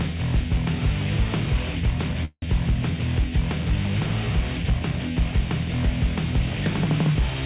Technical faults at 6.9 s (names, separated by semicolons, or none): none